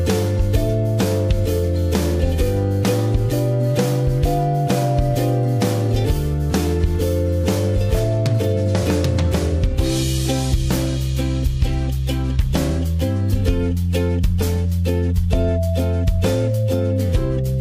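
No technical faults are audible.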